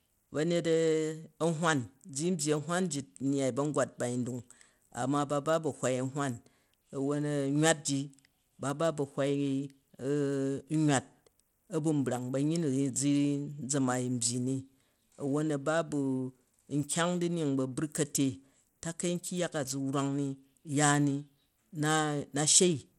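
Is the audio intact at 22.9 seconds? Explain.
No. At 22.9 seconds the speech carries the same damage heard throughout the clip, most likely Bluetooth SBC compression at a low bit budget, consistent with about a 96 kbps stream. With few bits to share, the weak upper sub-bands are starved and the rest coarsely quantised, so the treble flickers and a gritty, aliased haze clings to the sound. On a spectrogram everything stops sharply at 16.9 kHz, with patchy, blocky energy just below that ceiling.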